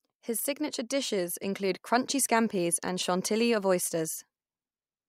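Nothing in this bit of speech stands out as a technical fault, so there's really nothing to flag here.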